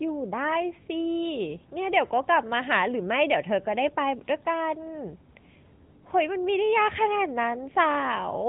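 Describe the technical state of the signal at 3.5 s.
At 3.5 s the speech is under AMR narrowband mobile codec damage, as it is across the whole clip. Nothing above 3.8 kHz survives. The vocal-tract model with sparse pulses makes the voice plainly buzzy and synthetic at its 10.2 kbps bitrate.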